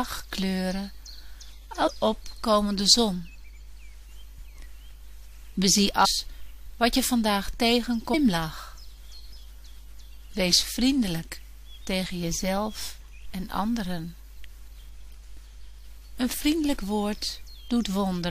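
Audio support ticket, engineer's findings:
Damaged data in a compressed stream, five short chirp/blip events: 1.86–1.88 s, 6.04–6.06 s, 8.13 s, 9.31 s, 14.51 s. Each lasts about 20 ms or less. Probable component: compressed file or stream before the decoder. Mechanism: corrupted bytes in the affected frames, so the decoder misreads or rejects them, loses frame sync and resyncs at the next header. Check source file integrity and the transport path.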